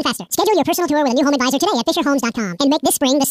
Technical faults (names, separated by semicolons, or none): wrong sample rate